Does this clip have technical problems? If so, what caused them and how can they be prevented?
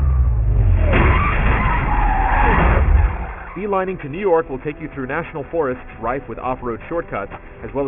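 Yes, there's aliasing throughout. The rate was dropped without filtering first, and the sound points to a fall from 48 kHz to 6 kHz, so everything above 3 kHz folds back as unrelated tones about 20 dB below the signal. To prevent it, low-pass below the new half-rate before downsampling.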